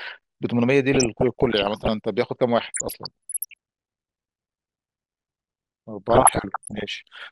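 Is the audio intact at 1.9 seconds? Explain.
No. At 1.9 s the sound is marred by short blips of noise, the tail end of DAB burbling running from 0.92 to 1.92 s. Bit errors, under one percent, slipped past error correction into the MP2 audio data and put the noise into single sub-bands. Throughout, the sound is dull with a granular gurgle, likely from MP2 compression at a low bitrate, consistent with about 80 kbps, where upper sub-bands are switched off.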